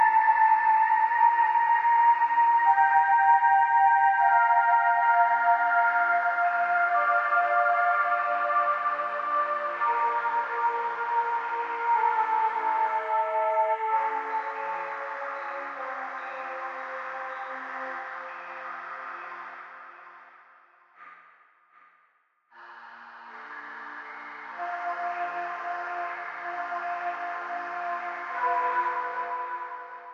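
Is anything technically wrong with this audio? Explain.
Yes. From 12.60 to 13.81 s there is loudspeaker feedback squeal. A microphone hears the loudspeaker it feeds, and loop gain passes one at 642 Hz. That tone swells over about a second to roughly the sound's own level, showing as one bright horizontal spectrogram line and a swelling waveform.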